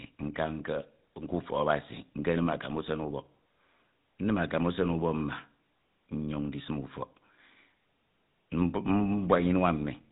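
Speech, carried through the GSM full-rate codec for its whole length, with plainly audible codec damage. The codec models the vocal tract as a filter and excites it with a regular pulse train, keeping only a coarse fraction of the excitation detail, so the voice takes on a buzzy, gravelly roughness throughout. The spectrum stops at about 3.8 kHz, and the overall character fits the 13 kbps full-rate mode.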